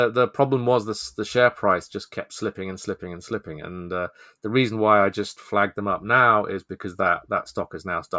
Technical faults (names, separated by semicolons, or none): none